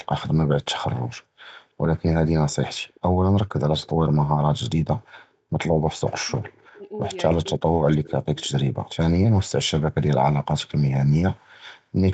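At 2.88 to 3.0 s there is a faint echo leak: a copy of the speech returns 325 ms late, about 35 dB below the voice. The likely cause is a far-end loudspeaker whose echo canceller let some residue through. On a spectrogram it appears as a weak, smeared repeat of the earlier harmonics.

From 5.94 to 7.17 s and again from 7.35 to 8.37 s, speech is suppressed in double talk. The voice sinks in patches by as much as around 40 dB, for about a second in the first stretch and about 0.7 s in the second. The likely cause is a canceller that could not tell this talker from the echo while both sides spoke, and so turned both down. The waveform shows abrupt gouges in the envelope, and on the spectrogram the harmonics thin out or drop away.

Two more echo leaks follow, at 8.04 to 8.1 s and at 8.44 to 8.49 s, with the same 325 ms delay. They are louder, at about 25 dB and 30 dB under the speech. Each is a brief fleck of delayed energy that shows as a faint harmonic ghost within the band, which ends at 8 kHz.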